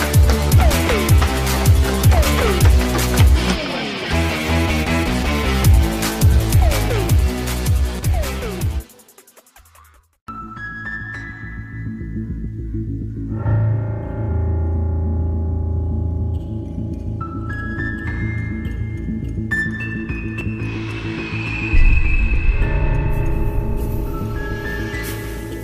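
The capture software likely fell behind the hardware twice, so incoming samples were overwritten as dropped buffers (overruns). At 6.53 s and again at 20.41 s, roughly 70 ms of sound is missing, and the two edges are butted together, giving an abrupt jump forward.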